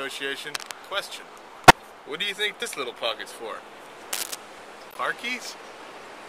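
Two kinds of fault affect the audio. From 0.55 to 0.74 s and again from 4.13 to 4.35 s, dense, uneven scratching rides over the sound, likely cable scratch noise from a worn cable or connector being moved and changing its contact resistance. The first burst is about as loud as the sound itself, and the second is somewhat louder. At 1.68 to 1.76 s and 4.91 to 4.98 s, short bursts of misplaced spectral energy show a corrupt frame decoded: a few damaged compressed frames were played with wrong gains or codes. The first burst is the stronger, and the second is much quieter.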